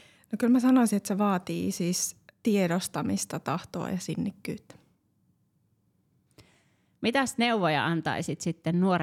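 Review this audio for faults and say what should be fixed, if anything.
No faults are audible; nothing here needs fixing.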